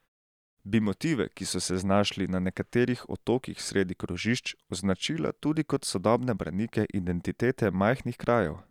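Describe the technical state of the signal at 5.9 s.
At 5.9 s the speech signal is intact, with no technical fault to be heard.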